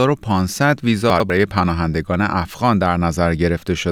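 Around 1.1 to 1.3 s there's a stretch where the chunks play out of order. The audio seems to move in 100 ms blocks, and one of them turned up a chunk late, so the two blocks in that window play swapped. Nothing's missing, but the sequence is scrambled, and with three hard joins where the pieces don't line up you get a brief jumbled stutter in the speech.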